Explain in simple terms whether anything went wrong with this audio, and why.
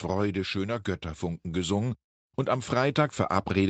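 From 1.19 s to the end, automatic gain rising: the voice and background noise swell together gradually, rather than jumping suddenly, as the call's gain control turns itself up.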